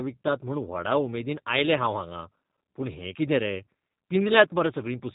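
A speech recording that has passed through the G.729 codec from start to finish, with plainly audible damage. The voice is rebuilt from a vocal tract filter, a pitch predictor and a sparse set of pulses per 10 ms frame, so it comes across as rough and slightly synthetic, and nothing above 4 kHz survives, leaving a narrowband, telephone-like tone. That character fits the G.729A variant at around 8 kbit/s.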